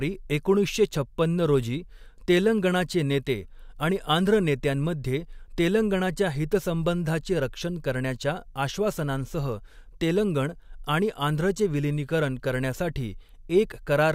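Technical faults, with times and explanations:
No technical faults can be heard in the speech recording, and its signal remains continuous and stable for its whole duration.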